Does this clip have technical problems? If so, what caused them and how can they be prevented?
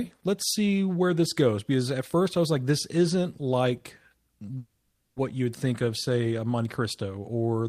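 Yes. A call audio freeze runs from 4.57 to 5.18 s, just before "you would": the last sound stretches into a fading buzz or hiss for about 590 ms, ends in 50 ms of silence, then speech resumes with nothing lost. On a spectrogram it appears as a smeared, steady band that dims, then a brief blank. The likely cause is delayed packets draining the jitter buffer. A larger adaptive jitter buffer or a steadier network path would prevent it.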